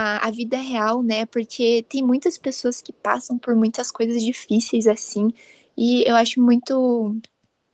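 At 5.04 to 5.12 s and again at 5.39 to 5.43 s, short scraps of echo leak appear: a very faint, roughly 40 dB down copy of the speech trailing 278 ms behind, likely from a far-end loudspeaker whose echo canceller let some residue through.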